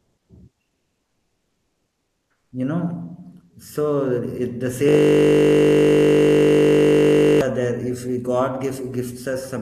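It's a speech clip with two problems. Right at the start, from 0.00 to 0.29 s, and again from 0.63 to 2.51 s, the real room background drops out and is replaced by comfort noise: a flat, featureless hiss with none of the original texture. The first patch sits about 8 dB above the surrounding background and the second about 6 dB below it, so you hear the floor jump up and then sag. This is likely discontinuous transmission in an Opus-style codec, where the sender goes quiet between phrases and the receiver fills in synthetic noise. Then from 4.89 to 7.41 s there's a system hang loop. A single 20 ms chunk of audio repeats exactly, well over a hundred times, while the machine is frozen and the sound hardware keeps cycling the same buffer. Because the loop is that short, it comes across as a steady 50 Hz buzz for about two and a half seconds.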